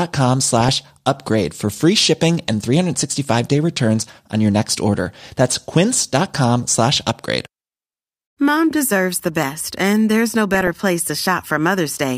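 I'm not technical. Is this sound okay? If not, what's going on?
No. Twice the speech turns into a short burbling patch: 0.60 to 0.81 s, just before "upgrade for free shipping", and 10.54 to 10.76 s, just after "best and there's no". This is DAB burbling. Weak digital radio reception let errors slip past the correction, so slices of the sound jumped about briefly.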